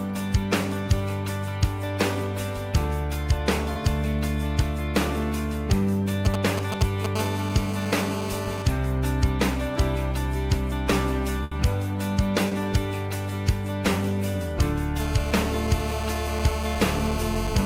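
At 3.73 to 3.77 s there is a brief smear in the audio, a short concealed packet loss. About 20 ms of sound arrived too late for the decoder, and the receiver covered the hole by extending the preceding sound before blending back into the real signal.

From 6.25 to 7.06 s a galloping dit-dit-dit of short raspy buzzes breaks in, only a little quieter than the audio itself. These are GSM signalling bursts: a nearby 2G phone is exchanging brief groups of radio bursts with the network, and the audio circuitry rectifies them into sound.

Right after, from 7.16 to 8.62 s, the pattern becomes a steady, hard GSM phone buzz at 217 Hz, rich in harmonics and about 10 dB below the signal. A nearby phone is in a call and now transmits continuously at 217 bursts per second, which the circuit demodulates.

At 11.43 to 11.53 s a burst of packet loss replaces about 80 ms with a held, fading continuation of the previous sound. 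The audio then picks up further along, and the stretch in between never arrives.

A second short concealed packet loss at 12.49 to 12.53 s leaves another brief smear where about 20 ms was patched over.

From 15.0 s to the end the GSM phone buzz returns, a steady 217 Hz rasp about 9 dB below the signal, again from a nearby handset transmitting during a call.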